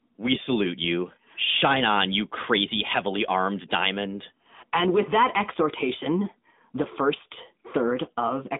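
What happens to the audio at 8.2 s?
At 8.2 s the speech sounds boxed-in and synthetic, with no content above about 3.7 kHz and a narrow line band of roughly 200 Hz to 3.6 kHz. The codec damage is plainly audible. This is the AMR narrowband mobile codec, present throughout the clip. It resamples to 8 kHz and rebuilds the speech from a vocal tract model driven by a pitch predictor and a few pulses every 5 ms. The artefacts point to the 10.2 kbps mode.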